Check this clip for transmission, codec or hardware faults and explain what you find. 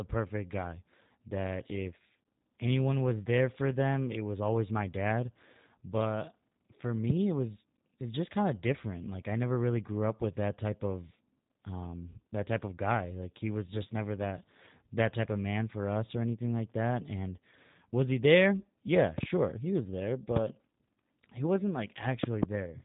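Two faults are present: low-bitrate codec coding across the whole clip, and a series of loud pops.

The speech has passed through the G.729 codec (the G.729A variant) at 8 kbit/s. It rebuilds each 10 ms frame from a vocal tract filter, a pitch predictor and a few pulses, so the damage is plainly audible as a rough, slightly synthetic tone. On a spectrogram, energy stops flat at about 3.8 kHz, with smeared, blocky harmonics below.

Loud pops occur at 7.10 to 7.12 s (one pop), at 19.18 to 19.25 s (two pops, just before "he was there"), at 20.36 to 20.39 s (one pop, just after "he was there"), and at 22.24 to 22.45 s (two pops, just after "he wasn't"). The likely cause is a voltage step or pulse from a plug, switch, static or driver glitch. The later pops are the strongest, roughly 20 dB above the speech. The speech carries on underneath each one. On the waveform each pop shows as a tall, narrow spike. 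On a spectrogram it appears as a thin vertical stripe across all frequencies.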